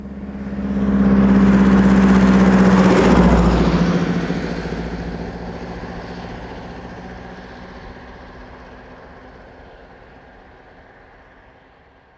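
No technical faults are audible.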